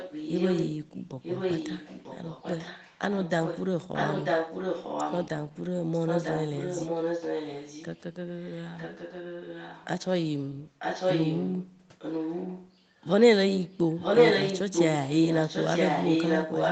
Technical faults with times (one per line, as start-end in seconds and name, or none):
0.00-0.75 echo leak
1.22-5.29 echo leak
5.61-9.88 echo leak
10.79-13.05 echo leak
13.72-16.71 echo leak